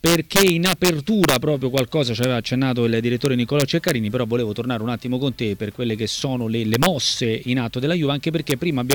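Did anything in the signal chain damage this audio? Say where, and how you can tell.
Yes: integer overflow in a fixed-point gain or sample-format stage. Loud peaks wrap to the opposite sign as violent cracks at 0.06–1.36 s (about 6 dB over), 1.78, 2.23, 3.26–3.91, 6.74–6.86, 8.50 and 8.91–8.93 s, far sharper than clipping's flattened peaks.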